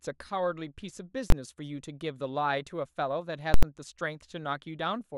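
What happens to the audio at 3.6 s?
At 3.54 to 3.63 s, invalid numbers at full scale hit the speech. A failed calculation pins one roughly 4096-sample block to maximum, giving loud pops with nothing between.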